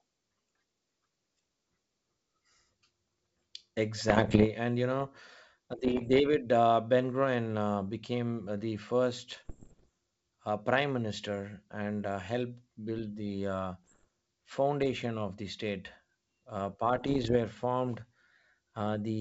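Short bursts of popping and rough, gritty distortion with brief jumps in level break through the speech at 4.08 to 4.47 s, 5.78 to 6.20 s, 9.32 to 9.88 s (between "uh became the" and "uh prime minister and"), 13.84 to 14.05 s (after "helped build the uh", before "foundation of the state"), and 16.96 to 17.37 s. These are bit errors on an ADPCM link, at a rate of roughly one percent or a little less. Over the 64 kbit/s G.722 wideband path, each corrupted bit throws the decoder's step size and predictor off, so the damage rings on for a few milliseconds rather than staying a single click.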